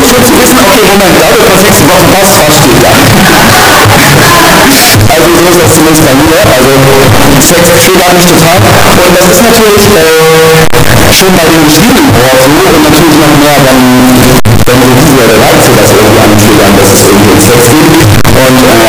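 Harsh, very loud distortion runs through the whole clip, with quiet stretches blasting as loud as everything else. That's the classic sign of signed and unsigned mixed up, likely 16-bit samples read with the wrong sign convention, so every zero crossing snaps across the entire range.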